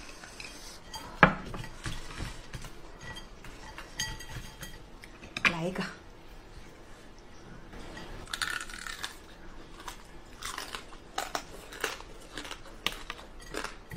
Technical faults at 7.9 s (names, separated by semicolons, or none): sudden gain jump